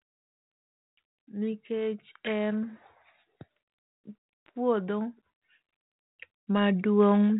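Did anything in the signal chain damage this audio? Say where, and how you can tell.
Yes. The damage sits in call processing, where automatic gain rising lifts the level twice: from 0.86 to 2.83 s by about 6 dB, and from 6.46 to 7.35 s by about 5 dB. In both spans the speech and the background swell together, which marks a gain stage rather than the talker getting louder. The control judged its input too quiet and ramped gain up gradually. The light, band-limited colouring of the 32 kbit/s G.726 ADPCM path stays steady through both rises.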